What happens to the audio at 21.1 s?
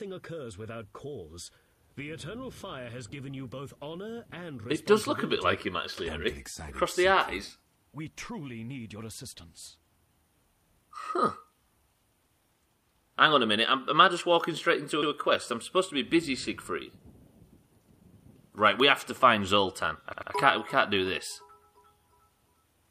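Nothing goes wrong at 21.1 s; the audio plays through that moment intact, with no dropout, click or distortion.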